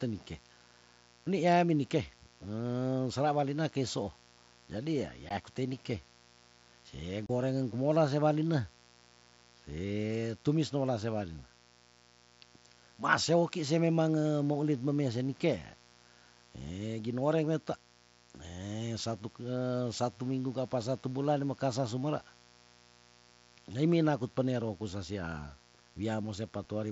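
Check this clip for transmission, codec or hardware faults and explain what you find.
Two faults are audible in the speech: a continuous mains buzz and two brief Bluetooth dropouts, carried over a wideband mSBC headset link.

Mains buzz runs throughout, built on 60 Hz harmonics roughly 30 dB below the speech. Its raspy edge, unlike a pure hum, comes from sharp switching spikes reaching well into the kilohertz range.

Unconcealed Bluetooth headset packet loss hits at 5.29 s for 15 ms and from 7.26 to 7.30 s for 30 ms. Lost headset packets leave hard-edged gaps, not the smoothed fill of concealment.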